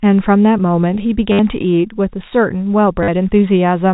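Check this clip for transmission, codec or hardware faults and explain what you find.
Two stretches of packet loss with last packet repeated affect the speech, at 1.32 to 1.39 s (70 ms) and 3.03 to 3.08 s (50 ms). Each time, the receiver replayed the last packet it had until new data arrived. The repeats ignore the pitch period, and the run buzzes at about 100 Hz, which fits 10 ms packets. It is heard as a brief robotic stutter. A waveform shows an identical short block tiled end to end with steps at the seams. A spectrogram shows evenly spaced vertical lines and frozen harmonics. The G.711 telephone band, with nothing above 4 kHz, is present throughout.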